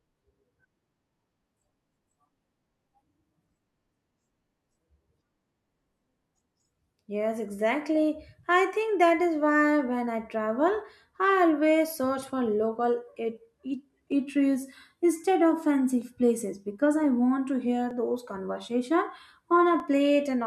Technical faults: clock drift buffer slips

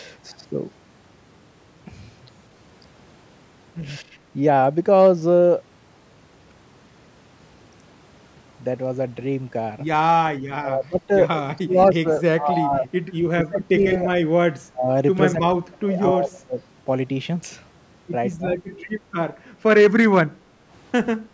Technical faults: speech suppressed in double talk; background gated by the echo canceller

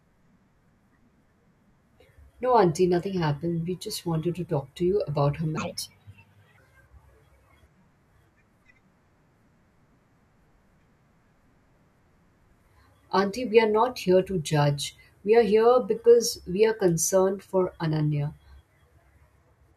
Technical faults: wrong sample rate

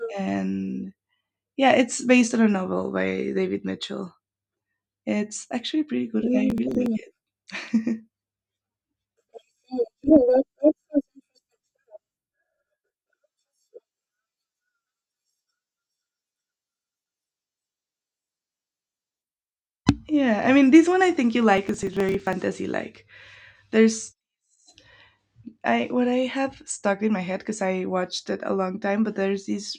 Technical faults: processor overload crackle

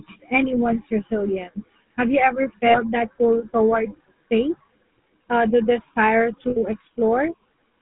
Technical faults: GSM full-rate codec; lost GSM frames

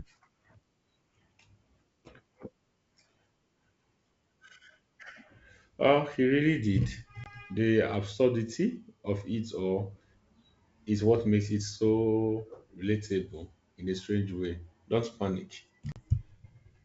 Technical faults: packet loss on an ADPCM call

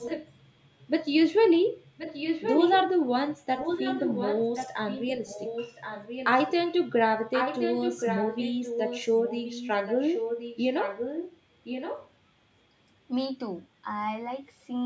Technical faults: echo leak

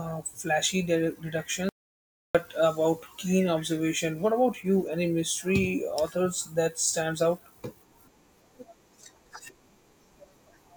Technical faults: audio dropout to silence

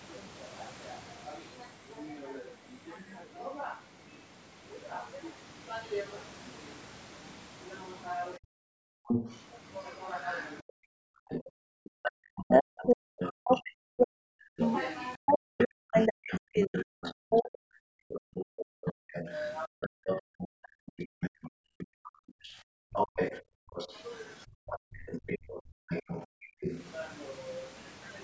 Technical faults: other side's voice leaking through; speech suppressed in double talk; background gated by the echo canceller

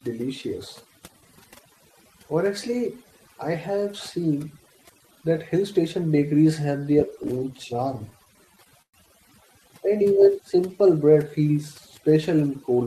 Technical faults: overdone noise removal; repeated stalls (stutter); jitter buffer slow-down

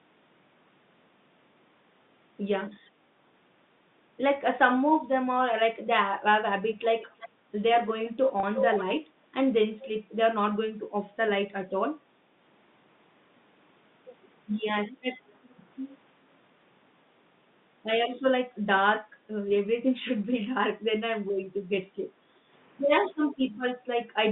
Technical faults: echo leak; background gated by the echo canceller; packet loss with pitch repetition

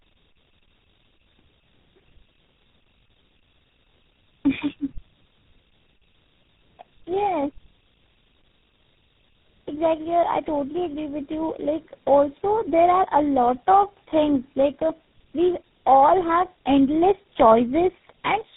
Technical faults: tandem speech coding

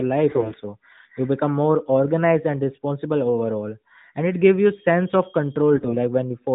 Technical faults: AMR bit errors

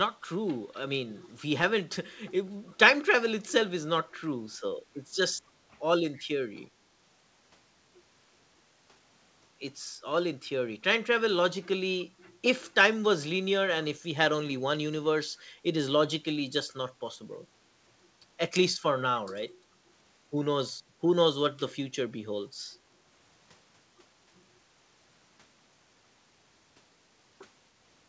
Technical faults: echo leak; background gated by the echo canceller

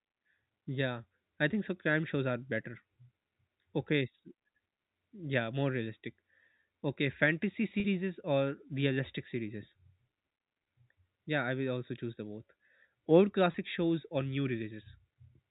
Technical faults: packet loss with pitch repetition

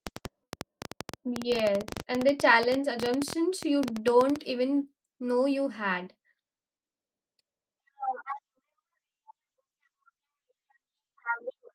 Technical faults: train of clicks

